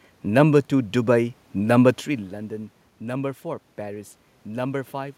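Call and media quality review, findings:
No system fault found in the speech signal; the background noise belongs to the room, and the level change around 2 s comes from the talker shifting position relative to the microphone.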